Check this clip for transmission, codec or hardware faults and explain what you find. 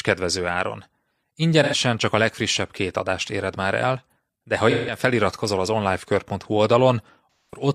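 Three short patches of AAC frame loss with concealment break up the speech. The first runs from 1.63 to 1.75 s, just before "csak a legfrissebb két". The second runs from 4.70 to 4.98 s, between "már el de ha" and "feliratkozol az". The third runs from 7.32 to 7.67 s. The missing stretches last about 85, 171 and 213 ms, which fits runs of roughly two, four and five AAC frames. At each gap the decoder rebuilt the sound from the last good spectrum. What you hear is a smeared, noisy or phasey stretch rather than a hard silence or click, and that sets it apart from a plain dropout.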